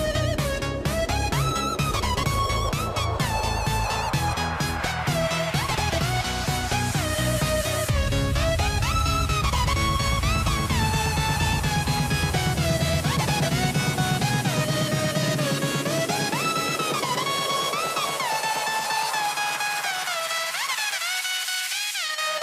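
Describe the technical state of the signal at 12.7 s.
At 12.7 s the signal is intact, with no audible technical fault at that moment.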